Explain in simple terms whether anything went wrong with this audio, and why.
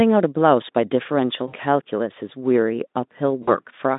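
VoIP packet loss concealed by the speech codec, at 1.47 to 1.56 s and again at 3.44 to 3.55 s: bits of the call went missing, so the decoder guessed by stretching the last sound, leaving a brief buzzy, fading smear over gaps of about 60 ms and 40 ms.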